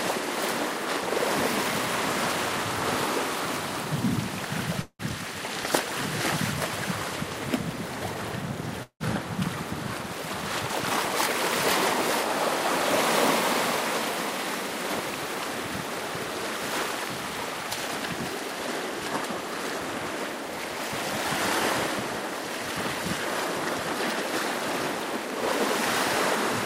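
At 4.81 s and again at 8.83 s, the sound smears into a fading buzz then brief silence for about 0.2 s, likely a long network dropout concealed by the receiver.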